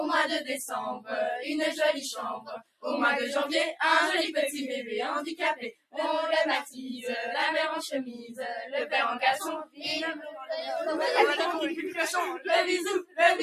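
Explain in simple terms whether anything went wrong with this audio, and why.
A noise suppressor applied to music or sounds was left running, treating steady parts as noise, so the level gently pumps and held sounds thin throughout. Sound cut by the noise suppressor happens where it briefly mistook sound for noise and pulled it right down, at 2.39–2.84, 5.72–5.98, 8.19–8.35 (milder) and 9.65–9.84 seconds.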